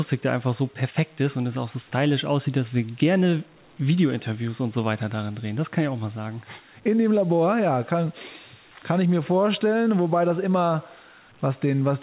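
No technical faults are audible.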